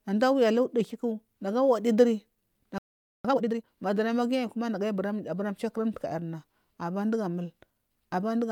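At 2.78 s the speech stops dead in mid-flow. Silence holds for about 0.46 s, until 3.25 s. This is a playback stall. The player likely ran out of buffered data or had its thread blocked.

From 3.25 s to 3.70 s comes a time-compressed catch-up. The player clears its backlog by cutting out small slices and cross-fading the joins. Speech runs at double speed for this stretch. Pitch stays normal, but the delivery sounds rushed.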